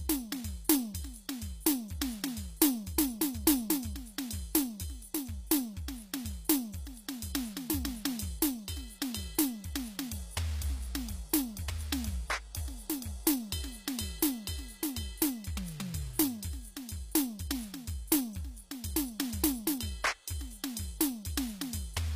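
From the first moment to the end, the treble has that bright-but-fake quality, coming across gritty and metallic, and nothing at all above about 15.5 kHz. That's likely HE-AAC compression: the codec keeps only the lower spectrum and fakes the top by copying lower bands upward under a coarse envelope, so the upper harmonics don't line up with the real ones. The damage is plainly audible, which fits a low bitrate somewhere around 24 kbps.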